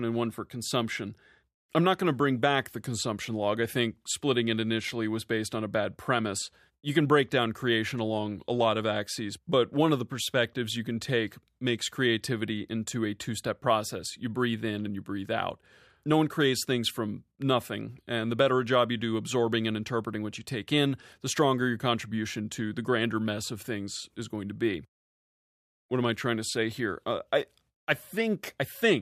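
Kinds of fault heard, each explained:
No technical fault can be heard anywhere in this speech recording.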